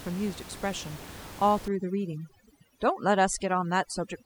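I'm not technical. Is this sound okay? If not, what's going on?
No. From 1.68 s to the end, there is overdone noise removal. A cleanup filter was set too strong. The background drops and breaks up into twinkling, warbling specks. The ordinary room noise underneath is simply part of the recording.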